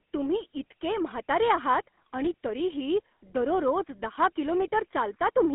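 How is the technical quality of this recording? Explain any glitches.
Quality is limited by GSM full-rate codec damage across the whole clip. The speech is confined to a phone band of roughly 250 Hz to 3.4 kHz, with nothing above 4 kHz. It has a buzzy, gravelly roughness, consistent with a 13 kbps vocoder that rebuilds the voice from a vocal-tract model and sparse regular pulses. Plain band-limiting would sound muffled but clean. Here the grain itself gives it away.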